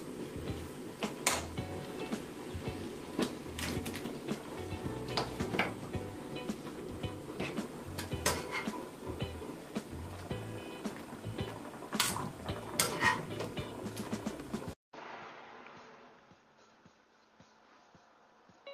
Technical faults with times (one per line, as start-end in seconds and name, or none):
14.73-18.73 input switched to a poorer device